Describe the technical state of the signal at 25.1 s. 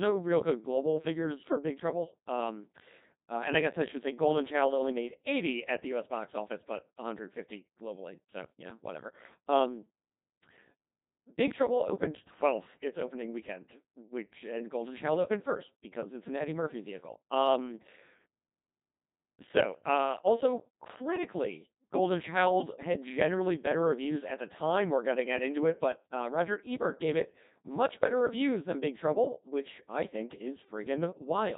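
At 25.1 s you're hearing Codec 2 vocoder damage, and it isn't local: it runs through the whole clip. The decoder isn't rebuilding the original waveform at all. It only gets pitch, voicing, energy and a rough spectral envelope, then resynthesises the speech from sine waves. That's why it sounds robotic and buzzy here, heavily so, which fits a low-rate mode around 2.4 kbit/s.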